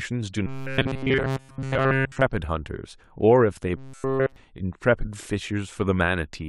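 From 0.47 to 2.22 s, the speech turns into a rigid metallic buzz. This is robotic sound from repeated short buffers. The fault returns from 3.77 to 4.36 s. Both times the buzz sits at 134 Hz. That points to a block of about 7.5 ms being looped. Fresh audio likely arrived too seldom, so the last short block was replayed. Nearly all the real audio in those spans was skipped. The speech shape survives only roughly.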